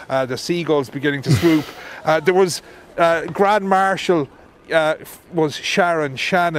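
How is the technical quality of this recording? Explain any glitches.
The recording's signal is technically sound, with nothing to report in how it was captured or carried through.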